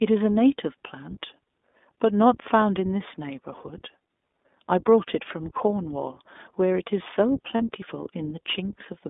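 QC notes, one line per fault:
Throughout, iLBC codec: the speech sits in a narrow telephone band, roughly 250 Hz to 3.6 kHz, so there's nothing up top and a thin low end. The codec is working at what sounds like its 15.2 kbps mode with 20 ms frames, coding each frame's excitation on its own, and the damage is plainly audible: a slightly rough, synthetic edge on the voice, the kind of buzz you get when the excitation is approximated rather than carried faithfully.
7.56 to 7.63 s, lost iLBC frames: about 40 ms goes missing here, which fits two dropped 20 ms frames. The decoder covers the hole by repeating the last pitch cycle blended with noise, so you hear a short held, faintly buzzy vowel where the real sound should be. Since iLBC frames don't depend on earlier ones, the voice snaps back cleanly right after the gap.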